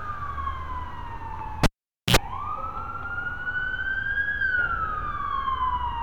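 A live cable was pulled and plugged in at 1.64 s: a pop, 0.48 s near-silence, brief 60 Hz mains buzz, then a pop at 2.16 s.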